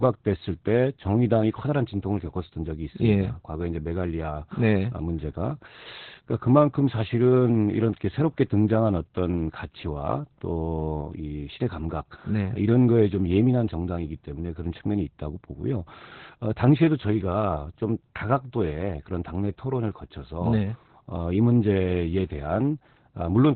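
Opus voice compression runs throughout: at about 8 kbps the SILK coder keeps only a narrowband range and coarsely codes the excitation, leaving the speech muffled, hoarse and slightly robotic.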